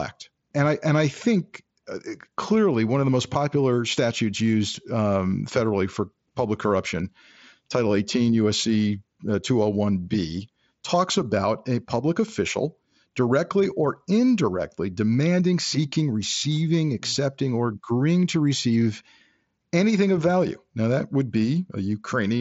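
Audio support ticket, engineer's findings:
Findings: no faults found in the speech audio, which comes through the mSBC headset link with its normal band limit, nothing above about 7.7 kHz.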